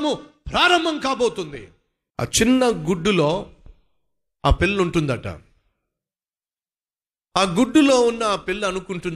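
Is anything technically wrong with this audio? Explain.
No, nothing is technically wrong with this audio.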